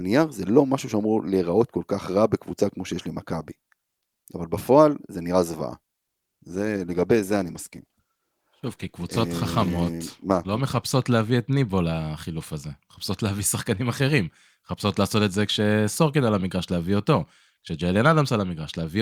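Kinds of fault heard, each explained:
Call bitrate drop: From 6.42 s to 12.15 s the speech goes coarser, rougher and watery, with the dullest stretch lasting about 4.2 s before it clears up. That sound fits the call's bandwidth estimate falling and the encoder being pushed from around 64 kbps down to roughly 19 kbps, so it has far fewer bits to describe the speech until the rate climbs back.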